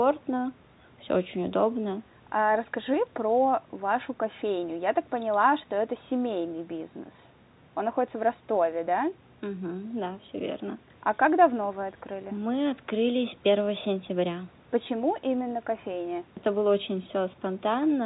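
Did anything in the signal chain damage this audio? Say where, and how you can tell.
No, the speech sits about 32 dB above the room's background noise, and its narrow telephone-band sound fits normal G.711 mu-law coding at 64 kbps after ordinary call microphone processing, with no stage in the chain leaving any audible damage.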